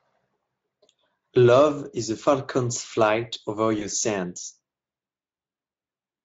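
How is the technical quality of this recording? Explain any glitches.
One brief glitch, in a clip of speech carried over a Speex-coded VoIP path with light codec colouring. At 3.79 to 3.86 s there is VoIP packet loss concealed by the speech codec. A dropout consistent with a single 20 ms frame was filled by extrapolating the previous pitch and spectral envelope at decaying gain. The result is a short stretched, fading smear, with the speech sounding weakened until about 3.86 s as the decoder state recovers.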